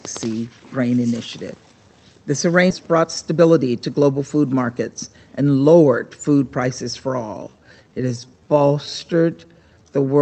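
Audio carried over a call link, with an upper limit near 8 kHz that fits Opus at around 32 kbps, and three timing faults. At 2.70 s there is a skip ahead. Roughly half a second of audio is gone, and nothing fills the gap. The two sides of the cut are butted together almost directly, so the sound lurches forward. This is what happens when a block of audio is lost in transit, or thrown out by an overflowing jitter buffer, while newer audio is already queued. The jump also cuts the playout delay by about the same half second. Right after, from 2.79 s to 3.64 s, a jitter buffer speed-up follows. Playback runs at 109% speed with unchanged pitch, and the passage sounds hurried. The receiver is trimming short pitch-period-sized slices, one after another, to drain excess buffered audio. Around a tenth of a second is removed across this stretch. From 7.22 s to the end, the pace abruptly slows to 0.733 times normal while pitch holds steady. 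That is a time-stretched section. The slowed audio drags, because short pieces are being repeated to lengthen it. The likely cause is software stretching this part to fit a set duration.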